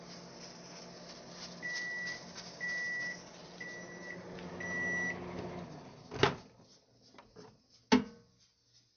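MP3 compression, likely, runs throughout: nothing reaches above 6.5 kHz, and starved frequency lines flicker on and off, giving plainly audible watery smearing that fits roughly 48 kbps.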